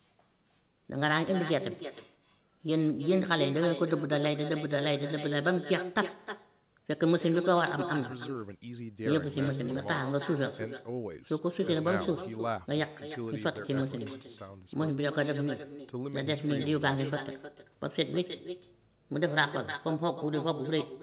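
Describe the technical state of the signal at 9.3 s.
At 9.3 s the speech carries an echo with no canceller, present across the whole clip rather than at this moment alone. The far end's loudspeaker feeds its microphone and nothing subtracts it, so each phrase returns roughly 300 ms later, about 11 dB quieter and thinner. Unlike room reverberation, which smears smoothly, this is a distinct delayed copy, band-limited to below 4 kHz like the telephone-quality path it travels.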